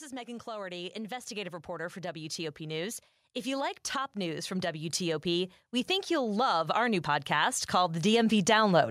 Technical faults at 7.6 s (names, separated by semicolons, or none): automatic gain rising